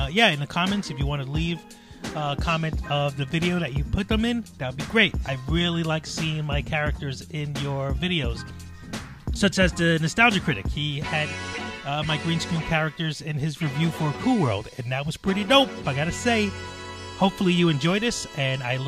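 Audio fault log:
No faults were heard anywhere in this recording.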